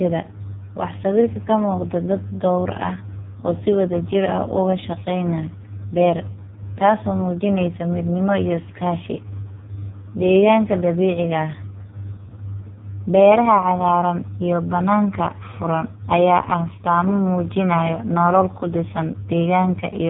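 From start to finish the speech carries heavy AMR narrowband mobile codec damage: nothing passes above about 3.8 kHz, and the few-pulse vocal-tract model leaves a buzzy, synthetic voice, which points to AMR-NB's lowest mode, 4.75 kbps. A simple low-pass filter would muffle without that buzz.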